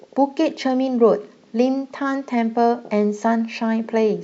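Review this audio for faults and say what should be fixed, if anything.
No faults; nothing needs fixing.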